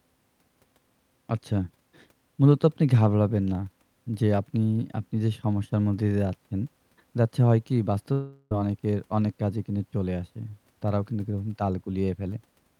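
From 8.12 to 8.52 s the speech breaks into a fading buzzy continuation of the last sound, likely a long network dropout that lost about 0.39 s. On a spectrogram, smeared, repeating bands decay without gaps before speech abruptly resumes, skipping the missing part.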